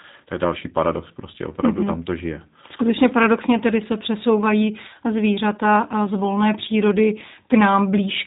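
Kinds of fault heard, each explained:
G.729 codec: speech rebuilt from a vocal tract model, pitch predictor and sparse pulses, heard here as a plainly rough, synthetic texture with nothing above 3.8 kHz, fitting an 8 kbit/s VoIP codec; a plain low-pass would dull the top without that modelled buzz.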